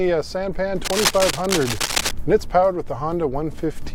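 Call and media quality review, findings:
Cable scratch noise, 0.83–2.13 s. Likely a worn cable, connector or control being moved, its contact resistance fluctuating rapidly. Result: dense, uneven bursts of scratching and rustling over the sound for about 1.3 s, only a few dB below the signal.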